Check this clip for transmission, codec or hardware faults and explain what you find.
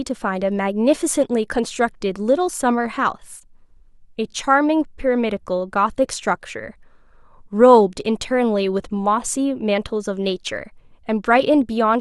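Checking this clip turns up no faults to explain.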